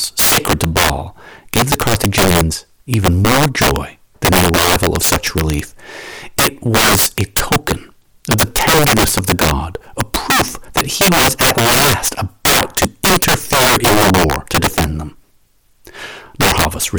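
Throughout the speech, integer overflow: the signal is driven about 17 dB past full scale, and instead of being limited, samples beyond the integer range wrap to the opposite sign. A small share of samples on louder syllables flip across the full range, producing violent, sharp cracks far harsher than clipping.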